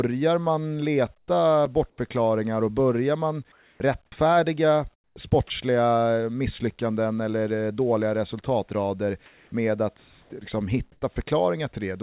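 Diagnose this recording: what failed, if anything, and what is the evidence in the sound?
Comfort noise in place of the background, 1.18–1.28 s, 9.26–10.32 s (just after "eller eh dåliga resultatrader") and 10.92–11.16 s, at the call-processing stage. In these pauses the real room tone, already about 45 dB below the loud passages, gives way to a flat, featureless hiss. At 1.18 s that hiss is about 10 dB quieter than the background it replaces. The sender has likely stopped transmitting during silence, and the receiver is generating synthetic noise to fill the gap.

Block of digital silence at 1.65 s, in the driver or buffer stage. A hole of 5.8 ms drops to silence and comes back with no fade, so it is heard as a tick or dip rather than as silence. A gap of that length fits one unfilled 256-sample buffer. The most likely cause is an audio callback that missed its deadline, leaving the output block empty.

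Sound dropped by the voice detector at 1.90–1.98 s, 10.00–10.32 s and 11.14–11.16 s, at the call-processing stage. In each case the sound gives way to steady noise, cutting off about 40 ms, 140 ms and 10 ms respectively. The sender's activity detector likely treated these quiet sounds as background and stopped sending, so the receiver played comfort noise where sound should have been.

Sound chopped by the voice detector at 3.52–4.12 s (right after "och börjar man") and at 4.94–5.50 s, again at the call-processing stage. In both stretches the audio breaks up as fragments alternate with synthetic noise, about 340 ms and 240 ms of fill in total. The detector was likely switching on and off repeatedly around low-level sound. Throughout the clip, the audio is band-limited at 4 kHz, which fits the G.711 call path.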